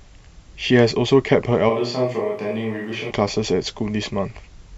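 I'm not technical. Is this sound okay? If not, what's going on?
No. From about 1.71 to 3.10 seconds the speech suddenly sounds farther away: hollow and echoey, thinner in the low end, a bit quieter, with faint room noise creeping in underneath. At 3.10 it snaps back to the close, full sound. This is a switch to a distant microphone. The close microphone's signal likely dropped out for that stretch, so the recording picked up a mic farther across the room, which hears more of the room and less of the speaker.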